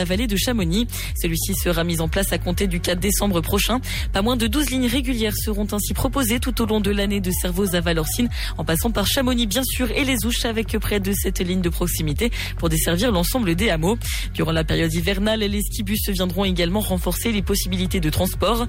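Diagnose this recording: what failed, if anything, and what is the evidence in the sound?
Hard clipping runs through the whole recording: the loudest peaks are driven about 3 dB past full scale at the converter or sample-format stage and cut flat. Only a small fraction of samples exceed the limit, so it shows as brief crackle on peaks rather than continuous fuzz.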